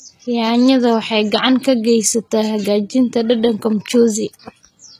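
From start to finish the speech carries plainly audible HE-AAC compression damage, likely from low-bitrate encoding, with the sound pointing to roughly 20 kbps. The treble has been rebuilt by copying lower bands upward, so the s sounds come out gritty and metallic rather than crisp. A spectrogram shows smeared, repeated-looking texture in the upper bands, harmonics that fail to line up across the crossover, and nothing at all above 14.9 kHz.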